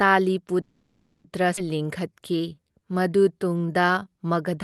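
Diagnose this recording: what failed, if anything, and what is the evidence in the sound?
Call audio freeze, 0.61 to 1.26 s, a network and jitter-buffer fault. The speech stops advancing and the last sound is stretched into a decaying buzz that nearly dies away, with about 30 ms of true silence, for roughly 630 ms in all. When playback resumes it picks up exactly where it left off, so nothing is lost, only delayed. Packets were likely held up in transit, draining the buffer so the receiver had to fill the wait.

Skip ahead, 1.56 to 1.59 s, also at the jitter-buffer stage. Playback jumps forward with only a tiny join of about 10 ms, and roughly 0.4 s of speech is simply gone, the two sides butted almost directly together. Having built up about 0.63 s of extra delay during the freeze, the buffer likely discarded that stretch to catch back up with audio that was already waiting, trading lost content for reduced latency.

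Jitter buffer slow-down, 1.78 to 4.17 s, in the receiver's buffer management. Across this span the speech runs at about 86% speed with its pitch unchanged, and sounds are drawn out as single pitch periods are repeated back to back. In total about 350 ms is added as the buffer rebuilds its reserve after the skip. Underneath it all, the call codec's band limit near 12 kHz can be heard.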